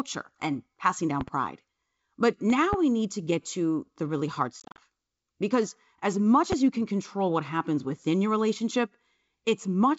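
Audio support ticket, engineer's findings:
Loud pop, 1.21–1.31 s, just after "and passing": double pop about 10 dB above the speech, speech continuing underneath. Loud pop, 2.50–2.76 s: second double pop, also about 10 dB over. Loud pop, 6.52–6.55 s, between "as much" and "you can control what": single sharp pop, about 15 dB over. Likely cause: voltage transients from a connector, switch, static discharge or driver glitch, shaped in downstream circuitry.

Packet loss on an ADPCM call, 4.60–4.80 s, right after "to the really hard": about 130 ms of audio dropped in scattered gaps across 180 ms, longest gap 40 ms, roughly fifteen packets' worth. Gaps filled with hard-edged silence. Decoder predictor and step size drift out of sync with the sender. Speech returns with brief slight distortion until the ADPCM state re-adapts. G.722 wideband link at 64 kbit/s carries the call.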